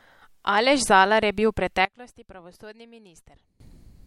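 From 1.85 to 3.60 s the speech drops by about 21 dB, then returns. The likely cause is one channel inverted. With one side's polarity reversed, the shared content cancels when summed to mono. Only the difference between the channels remains.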